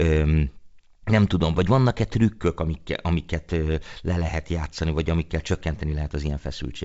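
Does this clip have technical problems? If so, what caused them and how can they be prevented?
No, there are no technical problems to point to in this speech clip. It carries the sound of G.722 wideband telephone coding at 64 kbit/s, with the band ending near 7.7 kHz and at most a faint trace of the coding.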